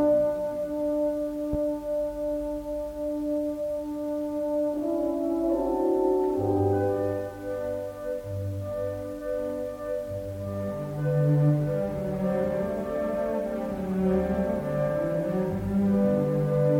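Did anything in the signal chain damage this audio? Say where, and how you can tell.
Yes. A single loud pop sits at 1.53 to 1.57 s, peaking about 5 dB above the surrounding sound, which continues underneath. It was likely a voltage step in the analogue wiring, such as a plug or switch transient. On the waveform it shows as an abrupt spike; on a spectrogram, as a thin broadband vertical stripe.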